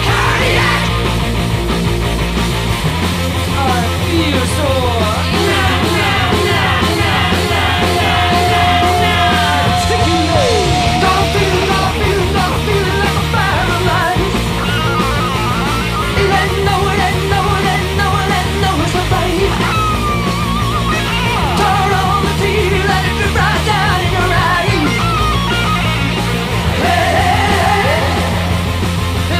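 Nothing stood out on listening to this recording.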